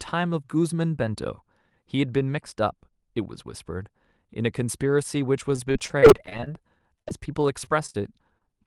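From 5.51 to 7.23 s, and again from 7.64 to 7.96 s, the audio suffers repeated packet loss with a robotic sound. Twenty-three gaps, none longer than about 44 ms, are patched by extending the preceding sound. The speech turns choppy, with pieces missing. In the second, shorter burst roughly a third of the span is concealment. On a spectrogram these stretches show smeared, frozen harmonics and abrupt seams, and the waveform shows repeated, suspiciously regular cycles. Above the speech the spectrum stops near 12 kHz, which fits the call codec's band limit.

At 8.38 to 8.43 s a short concealed packet loss occurs. About 20 ms of audio is missing, and the receiver covers it by continuing the last sound before crossfading into the real signal. It is heard as a brief smear or wobble. On the waveform it appears as a short patched stretch, and on the spectrogram as a thin vertical seam.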